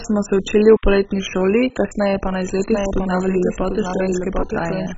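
MP2 compression runs through the whole clip, and is likely the cause of its dull, gurgling character. Layer II coding splits the signal into 32 sub-bands and shares out a small bit budget. Here the budget is so tight that every band above 7.5 kHz is switched off, and the surviving bands are coarsely quantised. That produces the granular, watery texture, and the damage is heavy enough to suggest a very low rate, around 16 kbps.

A doubled audio track begins at 2.59 s, just after "šoli kasneje pa na", and continues to the end. A second full-band copy of the speech enters abruptly, trailing the original by roughly 0.7 s and about 5 dB quieter. It has no decay or room colour, so it is not a reflection. The likely cause is the same audio being captured twice along paths with different delays, so two copies overlap out of step.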